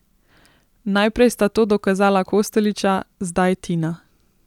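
Speech, with no audible faults.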